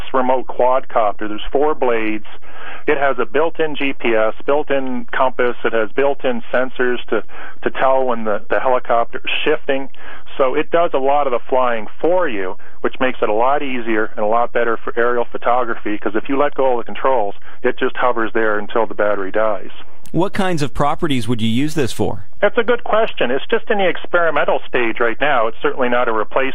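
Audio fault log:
throughout DC offset. The entire waveform sits displaced from zero by a fixed amount, at about -16 dBFS, so every sample carries the same constant added to it. The shift itself is inaudible, but it eats into headroom on one polarity, bringing peaks on that side closer to clipping, and it appears as a steady component at 0 Hz at the very bottom of the spectrum.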